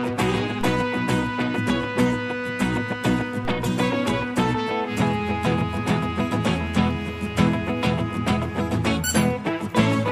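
At 0.61 s the zero line of the waveform jumps, a DC step. A low thump marks it. The offset then drains away slowly, as a high-pass filter near 2 Hz would pull it back. The same DC step recurs at 3.45 s, with another thump and the same slow decay.

At 4.05 s a single sharp click cuts through, a thin vertical line across the spectrum. The likely cause is dropped samples. A handful of samples, around 0.1 ms, seem to vanish, so the waveform leaps forward without losing any audible sound.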